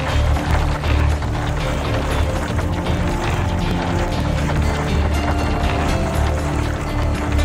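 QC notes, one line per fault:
0.14–7.28 s, periodic USB or driver dropouts: about every 0.123 s, a tiny chunk of audio, roughly 2 ms, is skipped outright, likely because a background task stalls the bus or driver. This produces about fifty evenly spaced ticks heard wherever signal is present.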